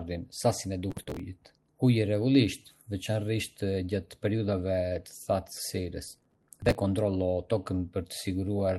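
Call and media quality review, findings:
Gritty crackle riding on the speech, 0.91–1.19 s and again, longer, 6.08–6.75 s. Processor overload crackle: audio thread missing deadlines on short buffers, around 5 ms, many in a row, each skipped and leaving a hard-edged gap until load eased.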